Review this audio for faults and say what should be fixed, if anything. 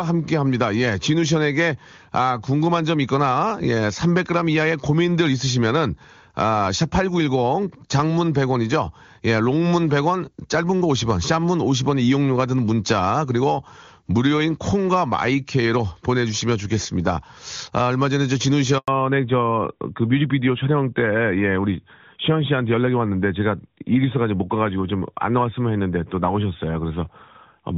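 At 18.78 s a handover gap drops the speech to silence for 100 ms, until 18.88 s, as no frames arrive while the call switches networks. From 18.88 s to the end, a fallback to narrowband removes everything above 4 kHz, so the speech turns duller and rougher than the clear HD Voice (AMR-WB) sound before it; this fits AMR-NB at around 12.2 kbit/s. Keeping the call on wideband-capable networks, with handovers that retain the wideband codec and buffer across the switch, would prevent both.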